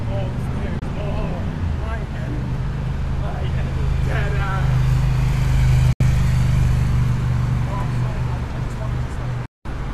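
Digital broadcast dropouts cut the sound at 0.79–0.82, 5.93–6.01 and 9.46–9.66 s. Each snaps to silence within 3 ms, fitting one, three and eight lost 24 ms frames.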